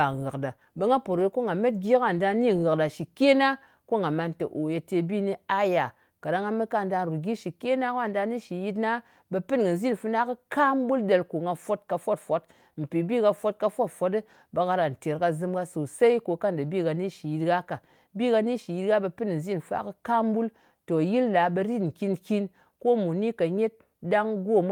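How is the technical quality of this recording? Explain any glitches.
No technical glitches can be heard in this recording.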